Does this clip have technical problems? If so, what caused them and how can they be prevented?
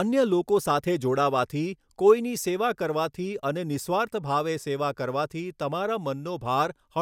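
No, there are no technical problems to point to in this speech recording. Since nothing went wrong, there is no cause to trace and nothing to prevent.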